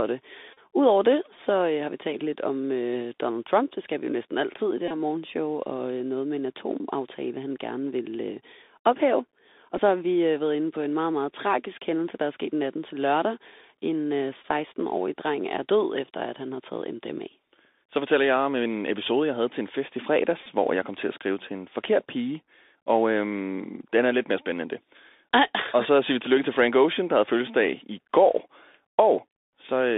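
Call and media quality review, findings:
Bluetooth CVSD headset codec throughout: band limited to roughly 250 Hz–3.7 kHz, with granular hiss, scratchy sibilants and slope-overload distortion on loud highs. This fits a 64 kbps delta-modulation headset link.

Bluetooth headset packet repeated: short buzzes near 267 Hz at 0.53–0.59, 4.88–4.91, 9.77 (just before "så har vi øh"), 14.42–14.46 and 20.43–20.46 s (between "til en fest i" and "hvor jeg kom til"). Lost packets were replaced by re-decoding the previous packet every 3.75 ms, and the gaps last 11–34 ms.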